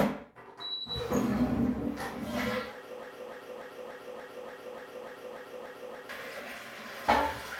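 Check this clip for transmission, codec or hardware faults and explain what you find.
One fault is present. From 3.03 to 6.09 s, a broken-record loop repeats a 292 ms fragment ten times, identically and without decay, unlike echo. A stalled stream likely resent its last fragment, and the audio due in that span is lost.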